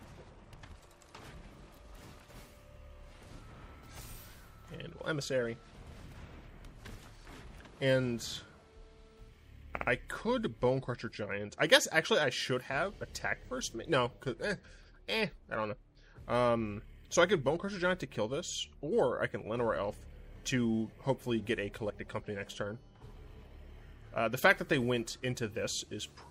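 Repeated frames occur at 9.75 to 9.87 s, where a 60 ms block of compressed audio was delivered to the decoder more than once. The same slice of sound plays twice more in immediate succession, giving a short mechanical stutter as the passage sticks briefly before moving on. The block length points to a run of about three codec frames being duplicated. The two extra plays stretch the audio by 120 ms.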